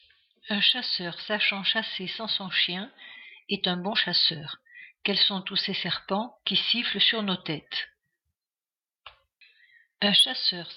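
Gain pumping runs through the whole clip: the gain ducks by roughly 10 dB under each loud sound and recovers between them, most likely from input gain set far too high with a fast limiter clamping down. The waveform looks flattened.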